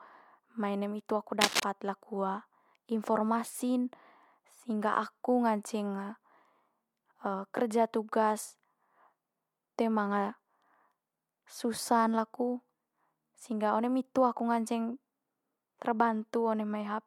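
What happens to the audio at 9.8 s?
Nothing goes wrong at 9.8 s; the speech carries on intact through that moment, with no dropout, click or distortion to be heard.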